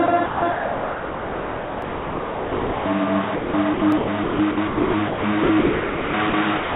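A recording of everyday sounds carried over a call path that uses G.711 A-law at 64 kbps, so nothing reaches above 4 kHz. A block size mismatch (truncated) runs throughout: a steady buzz at 46.9 Hz sits under everything. That rate fits one stage writing 1024-sample blocks while the next reads slightly fewer, so the tail of every block is discarded and the seam repeats at the block rate. The amount lost per block is small enough that the speed-up is negligible (1.0x), and the pitch stays normal.

The sound is chopped by the voice detector over two long stretches, 0.06 to 2.86 s and 3.36 to 6.76 s. In the first, about 2.52 s of material is replaced, and in the second about 1.82 s. Quieter passages and the edges of sounds drop out and are filled with hiss-like synthetic background, which matches RFC 3389 comfort noise. The result is choppy, likely because the sender's detector keeps toggling transmission on and off.

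There are also two dropped buffers (overrun), at 1.82 s and 3.92 s. Each is a tiny forward jump in the sound, a few milliseconds missing and the two sides butted together with no gap. This is likely caused by the capture side failing to read its samples before the hardware overwrote them.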